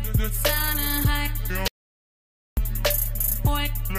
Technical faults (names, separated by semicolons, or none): audio dropout to silence